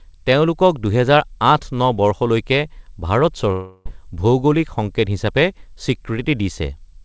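Just after "বৰ্ষলৈকে ভাৰত", from 3.52 s to 3.87 s, the speech gives way to a smeared, buzzy continuation of the last sound that fades without falling fully silent, and the audio then resumes with roughly a third of a second skipped. This is likely a long network dropout: packets stopped arriving and the receiver stretched the final sound to cover the gap. Throughout, nothing is heard above 8 kHz, which fits the G.722 call codec's bandwidth.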